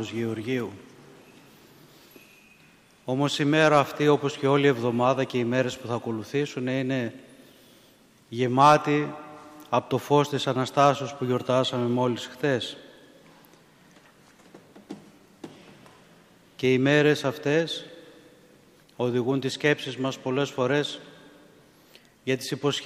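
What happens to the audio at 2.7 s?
Nothing goes wrong at 2.7 s; the audio plays through that moment intact, with no dropout, click, or other fault.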